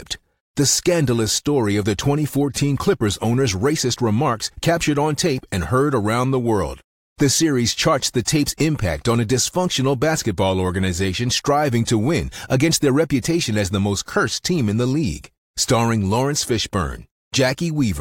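Speech recording, no technical faults detected.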